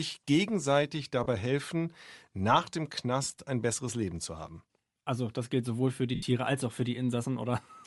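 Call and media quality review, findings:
Bluetooth LC3 compression, likely cause, whole clip: plainly audible breathy, grainy edge on the speech. Transform codec zeroing much of the upper spectrum and filling it with noise. Artefact pattern fits LC3 around 48 kbps with 7.5 ms frames.

Lost LE Audio frames, 1.24–1.26 s, just before "helfen nach dem": 22.5 ms dropout, fits three 7.5 ms frames. Decoder reuses the last spectrum with random signs, so you get a brief noisy smear instead of speech.

Lost LE Audio frames, 3.23–3.37 s, between "helfen nach dem" and "ein besseres": 75 ms lost, scattered over 150 ms in short runs, the longest roughly 15 ms. Sounds like repeated smeary concealment patches.

Lost LE Audio frames, 6.15–6.23 s, between "gilt sowohl für die" and "als auch für": one 75 ms gap. Concealment repeats the spectrum, then fades it after the first few frames.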